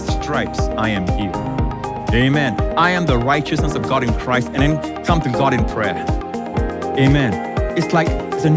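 No technical faults can be heard in this clip.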